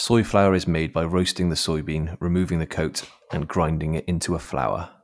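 No technical faults are audible.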